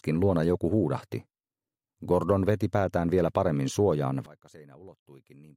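From 4.26 s to the end, the level falls by about 24 dB, likely from one channel inverted cancelling in mono. The waveform shrinks sharply and the spectrogram dims.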